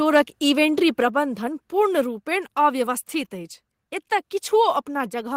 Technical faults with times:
1.02 microphone volume stepped down
5.10 microphone volume stepped down

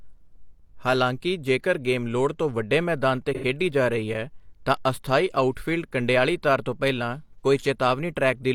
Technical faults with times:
3.35-3.44 AAC frame loss with concealment
7.40-7.44 AAC frame loss with concealment

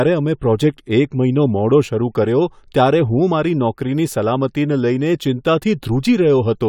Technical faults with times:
none

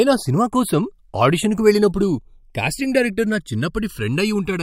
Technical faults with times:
0.00-4.63 channels drifting apart

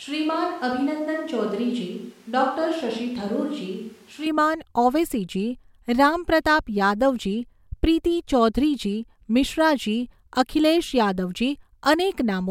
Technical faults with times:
0.00-4.26 switch to a distant microphone

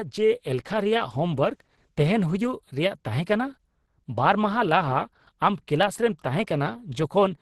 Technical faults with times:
0.00-7.41 Opus compression

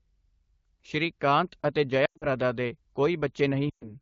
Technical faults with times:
2.05-2.27 lost AMR speech frames
3.69-3.93 lost AMR speech frames

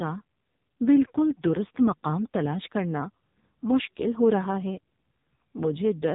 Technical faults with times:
0.00-6.15 AMR narrowband mobile codec

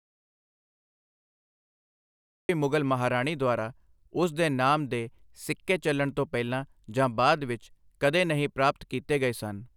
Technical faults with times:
0.00-2.49 audio dropout to silence

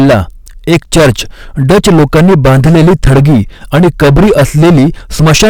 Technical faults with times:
0.00-5.49 hard clipping

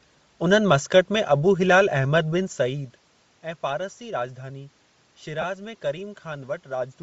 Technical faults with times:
0.00-7.02 Bluetooth LC3 compression
5.41-5.44 lost LE Audio frames

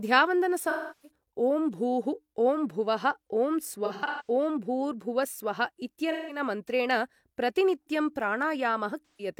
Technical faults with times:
0.69-1.09 AAC frame loss with concealment
3.85-4.30 AAC frame loss with concealment
6.11-6.39 AAC frame loss with concealment
9.08-9.28 AAC frame loss with concealment

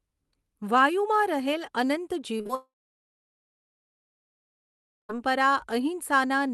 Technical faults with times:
2.37-2.51 short concealed packet loss
2.55-5.15 long network dropout

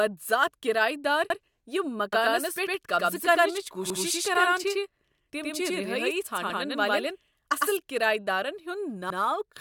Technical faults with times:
1.30-1.40 overlapping chunks
2.13-7.77 doubled audio track
3.90-4.00 overlapping chunks
6.50-6.60 overlapping chunks
9.10-9.20 overlapping chunks

